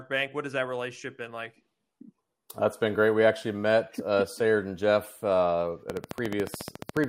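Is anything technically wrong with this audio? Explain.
Yes. From 5.90 s to 7.05 s, a train of clicks runs over the speech: a steady ticking at 14 clicks per second, some fifteen pops in all, each much like the last and peaking about 10 dB above the speech, so they stand out sharply. The evenly spaced, near-identical pulses point to a repeating electrical disturbance, likely interference from nearby equipment or a faulty connection or power supply injecting a brief spike into the signal path at a fixed rate.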